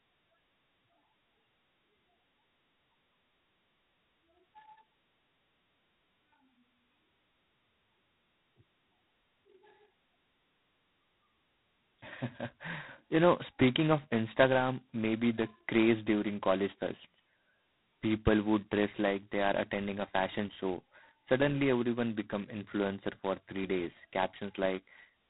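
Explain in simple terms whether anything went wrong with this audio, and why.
The whole clip suffers heavy G.726 ADPCM damage: the speech is squeezed into very few bits, leaving a rasping hiss that tracks loudness, and nothing above 3.9 kHz.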